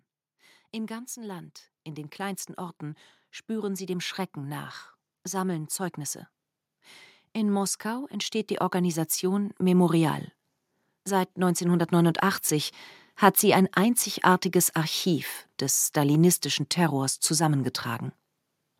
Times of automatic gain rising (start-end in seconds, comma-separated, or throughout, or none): 0.72-4.77, 7.33-10.24